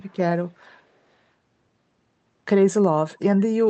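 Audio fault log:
0.04–0.18 s and 0.64–0.72 s, echo leak: two brief, very faint scraps of the speech return almost half a second late, at a delay of 484 ms, likely from a far-end loudspeaker whose echo canceller let part of its microphone pickup back into the call. Unlike room reverberation, which trails smoothly off each sound, these are detached copies at one fixed lag, heard through the call path's 8 kHz bandwidth.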